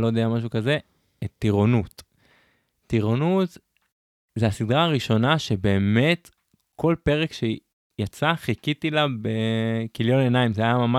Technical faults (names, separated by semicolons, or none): none